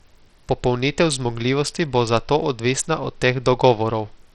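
Throughout the speech, the treble flickers in and out and a gritty, grainy noise rides on every syllable. The likely cause is heavy Bluetooth SBC compression, which fits a bitrate near 64 kbps that starves the upper sub-bands of bits. A spectrogram shows blocky, blinking high bands.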